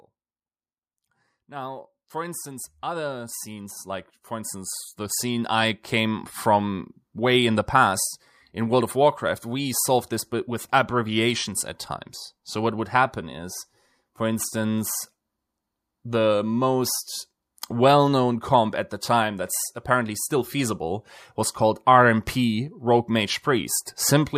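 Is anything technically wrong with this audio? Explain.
Yes. From 1.47 to 6.32 s there's automatic gain rising. The gain control decided the input was too quiet and pushed its gain up by about 15 dB over those five seconds, so the speech and the background noise swell up together.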